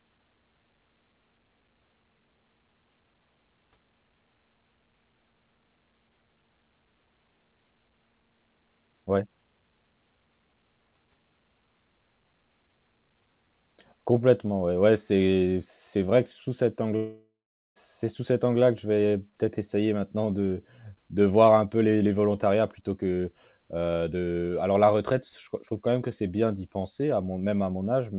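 Long network dropout, 16.96 to 17.78 s: after "vrai que sous cet", a fading buzz gives way to silence until "c'est sous cet", likely from about 0.8 s of lost audio.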